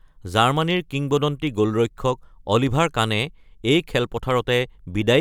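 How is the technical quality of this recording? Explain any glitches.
Nothing stood out as a glitch on listening to this speech recording.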